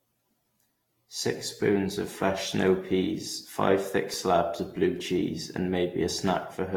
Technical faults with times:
0.00-6.76 generation loss
4.14-4.97 CD scratch ticks

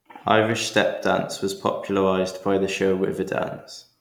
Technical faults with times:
none

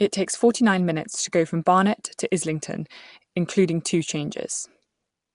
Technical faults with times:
0.00-5.35 Nellymoser compression
2.18 pre-echo

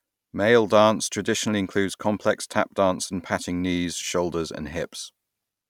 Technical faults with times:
none

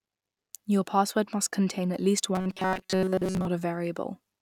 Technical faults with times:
2.35-3.47 robotic sound from repeated short buffers

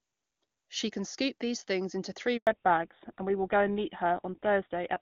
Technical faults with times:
2.37-2.47 handover gap
2.47-5.01 fallback to narrowband

